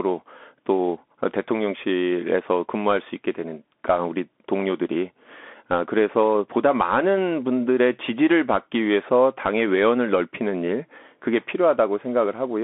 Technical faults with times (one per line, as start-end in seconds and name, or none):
0.00-12.64 Bluetooth CVSD headset codec